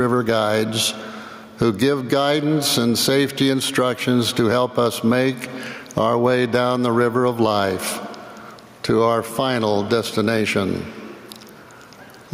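Gain pumping runs throughout: the gain ducks by around 15 dB under each loud sound, unlike a gate's hard cut, likely from excessive gain feeding a fast limiter.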